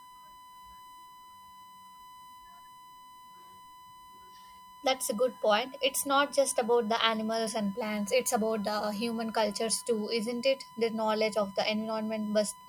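From start to finish, a steady USB whine sits under the speech as a fixed-pitch tone at 1 kHz, roughly 20 dB below the speech. The bus's 1 ms frame timing draws current in regular pulses that leak into the audio through shared power or ground, producing this constant tone. On a spectrogram it appears as a thin, unbroken horizontal line at 1 kHz, and the waveform's quiet gaps never fall to true silence.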